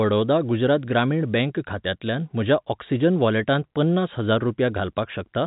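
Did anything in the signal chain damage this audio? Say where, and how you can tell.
No, the telephone-band coding chain shows no damage here.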